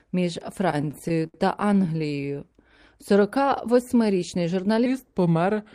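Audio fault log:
0.71–2.39 s, repeated stalls (stutter): packets kept arriving late, so the jitter buffer ran dry 27 times across this stretch, and each time the receiver stretched the last bit of sound to cover the wait, fading it in the longer gaps, the longest about 74 ms. About 333 ms of filler was inserted, roughly a fifth of the span, with nothing lost, so the speech keeps catching and dragging, stuttering forward in small hitches.
4.86 s to the end, section at the wrong speed: this closing stretch plays at 0.864 times its proper rate, likely because it was resampled or played against a mismatched clock. Speed and pitch fall together, so the speech turns slower and deeper, dropping by about three semitones, and the shift arrives abruptly rather than gradually, making the last part sound heavier and more drawn out than what comes before it.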